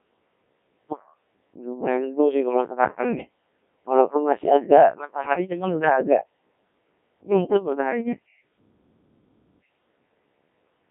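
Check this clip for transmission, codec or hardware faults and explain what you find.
The clip carries one codec fault, present for its whole length: the Codec 2 vocoder. Instead of preserving the waveform, the encoder transmits only pitch, voicing, energy and a coarse spectral envelope, and the decoder rebuilds the speech from sine waves. Damage here is heavy, consistent with a very low rate mode around 1.3 kbit/s. The result sounds robotic and buzzy, confined to a narrow 200 Hz to 3.4 kHz line band.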